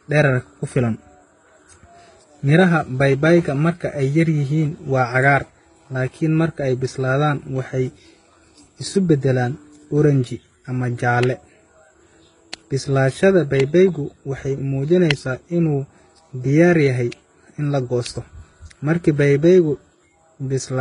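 Throughout, the speech is dull, with nothing above 10.6 kHz and two kinds of smeary, warbling artefacts layered, likely transcoding between lossy codecs, HE-AAC then Vorbis.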